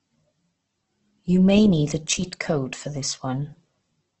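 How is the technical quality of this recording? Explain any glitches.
The recording is fairly rough, with heavy coding damage throughout and one brief level glitch.

Across the whole clip there's strong Opus compression degrading the speech. Nothing comes through above about 8.1 kHz, so the top end is gone, and what remains sounds grainy and rough rather than swirly. That's the music-style mode keeping each band's energy but filling starved bands with noise or copies of lower ones. The heaviness likely points to a very low bitrate, something like 12 kbps.

Then there's a sudden gain jump from 2.13 to 2.22 s, where the level drops by about 4 dB for a moment and comes back. Voice and background noise both duck together, so it's not the talker; it's likely a digital gain change applied instantly with no ramp.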